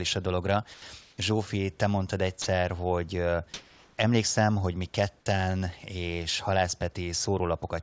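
At 0.74 s, just after "a dologra", the speech cuts out for 80 ms. This is sound dropped by the voice detector. It likely mistook the sound for background and stopped sending. A flat hiss fills the gap until the speech returns.

From 1.02 to 1.18 s, still after "a dologra", comfort noise stands in for the background. The sender likely paused transmission during silence. The receiver played synthetic noise instead. The room's texture turns smooth and featureless, shifting by about 2 dB.

At 2.42 s, a second drop by the voice detector removes 40 ms. It likely judged the sound to be background. The speech briefly gives way to plain hiss, then resumes.

From 3.54 to 3.98 s, comfort noise again replaces the background for 440 ms, just before "hogy mi ketten és". The sender likely went quiet in the pause. The fill is steady and textureless. Its level differs from the real background by about 6 dB.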